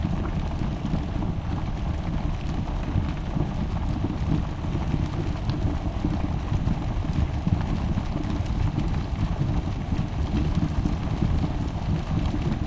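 From start to finish the whole thing runs at half speed and a full octave low, a classic wrong sample rate. Everything drags and sags together, which fits audio captured at 32 kHz being played back at 16 kHz with no conversion.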